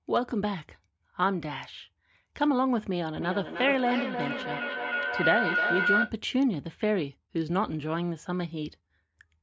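From 3.16 s to 6.19 s the speech is joined by feedback howl. Two devices in the same room joined the call, so sound from one loudspeaker reached the other microphone and circled back, gaining level each pass. It narrows to a tone near 1.5 kHz, pulsing about every third of a second, and climbs to about the level of the speech. Unlike ordinary echo, whose repeats fade, these repeats grow.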